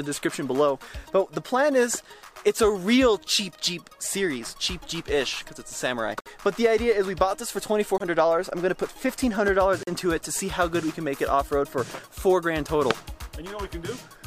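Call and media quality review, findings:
Bluetooth stall, likely link interference starving the headphone buffer: playback drops to silence about 53 ms at 6.21 s, 23 ms at 7.98 s, 41 ms at 9.83 s, then resumes.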